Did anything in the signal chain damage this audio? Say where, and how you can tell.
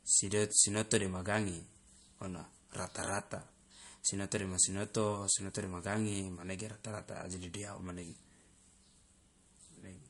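Yes. MP3 compression runs throughout: the speech has nothing above 11.2 kHz and plainly audible watery, swirling artefacts, which fits a bitrate near 48 kbps. The codec stage is the likely cause, where the encoder ran short of bits, cut the treble and zeroed weak frequency lines that flicker between frames.

Clock slip clicks run from 0.39 s to 10.04 s as faint, regular ticks about every 0.4 s, around twenty in all. They likely come from the converter stage, where two unsynchronised clocks differ by around 50 ppm. Each tick fits one sample dropped or repeated whenever the drift adds up to a whole sample.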